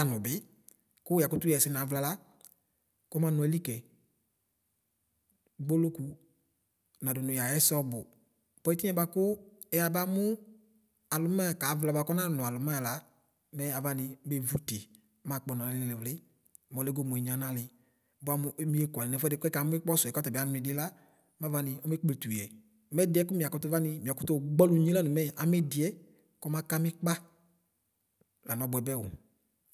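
No technical faults can be heard anywhere in this speech recording, and the signal stays continuous and intact throughout.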